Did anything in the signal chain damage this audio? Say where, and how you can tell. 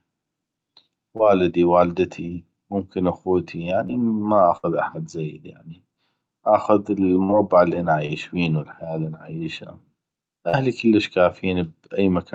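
Yes. The network stage dropped packets and the receiver's concealment patched short gaps: about 20 ms at 1.17–1.21 s, at 3.87–3.91 s after "والدتي ممكن اخوتي", and at 8.07–8.11 s between "اللي انا" and "بينو الحياه اللي انا", then about 40 ms at 10.49–10.55 s. Each is a short concealed packet loss, heard as a brief smear or wobble where extrapolated sound bridges the hole.

A burst of packet loss, about 60 ms of consecutive missing audio, hits at 4.57–4.65 s and at 7.23–7.31 s just before "اللي انا". The decoder stretched the last sound and faded it down, so a held buzz or dying hiss replaces the lost stretch before the audio jumps ahead.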